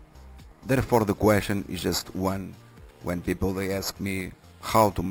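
From start to finish there's imaging from sample-and-hold upsampling: the audio was raised from 12 kHz to 48 kHz by just repeating samples, unfiltered. That mirrors the spectrum into a 6 to 12 kHz band and beyond, about 17 dB down, giving a metallic fizz that tracks the level.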